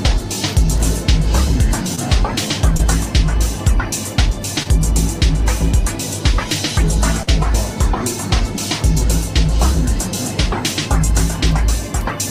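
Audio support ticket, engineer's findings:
Short concealed packet loss, four spots: 1.95–1.99 s, 2.77–2.81 s, 4.63–4.67 s, 7.23–7.29 s. Brief smears/wobbles. About 20 ms never reached the decoder in time each time (40 ms at 7.23 s). Decoder concealment extrapolated the previous sound, then crossfaded back.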